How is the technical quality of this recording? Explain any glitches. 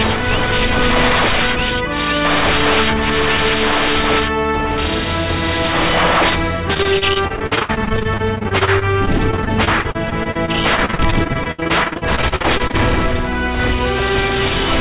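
The recording has one clear glitch: a stretch of repeated packet loss (robotic sound) from 6.74 s to 12.75 s, heard through the narrowband sound of a call path with nothing above 4 kHz, which fits a telephone codec such as G.711 mu-law.

Across those six seconds, dozens of short holes open in the stream, the longest about 68 ms. Each hole is patched by extending the sound that came just before it, and roughly a quarter of the span ends up filled this way. Because the patches follow one another so closely, the sound turns choppy and robotic, with pieces missing. What sets this apart from a single dropout is the steady, ongoing chop rather than one isolated gap.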